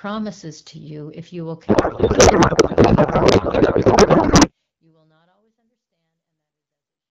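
Right after "you if you will", at 1.68 s, the speech collapses into garbled noise and warbling that barely tracks it, lasting until 4.51 s, partly under the gentle fade-out that begins around 3 s. This is a codec payload misread: the AMR frames were packed in octet-aligned form but unpacked as bandwidth-efficient, so the decoder took each field from the wrong bit position and rebuilt nonsense from otherwise valid-looking frames.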